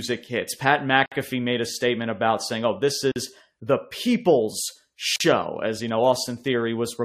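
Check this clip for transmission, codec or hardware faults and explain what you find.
The speech has three gaps at joins of encoded pieces, repeating every 2.0 s. Silences open at 1.06 to 1.12 s (about 57 ms, before "made a statement about"), 3.12 to 3.16 s (about 43 ms, before "the people's") and 5.16 to 5.20 s (about 43 ms, between "the people's" and "as you know"). The pieces were encoded separately and joined untrimmed, so encoder start delay and end-frame padding remain as dead air with smeared edges, and the speech resumes where it stopped.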